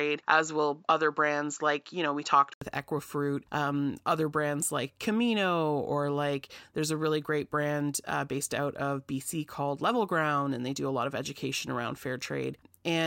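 From the start to 2.62 s the speech sounds dull, with nothing above 7.6 kHz, before an 80 ms gap and fuller sound: likely an input switched to a poorer device. A spectrogram shows a flat ceiling ending there; the waveform shows the gap without a level step.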